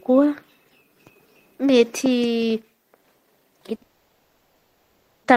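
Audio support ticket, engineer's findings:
Short stall from a late packet, 3.75 to 3.83 s. Sound held about 60 ms, slight buzz or dip. Jitter buffer ran empty; receiver stretched last sound, resumed same place, nothing lost.

Call audio freeze, 3.83 to 5.26 s. Held sound decays to low steady noise for 1.41 s, no silence. Likely delayed packets emptying jitter buffer; gap inserted, nothing lost.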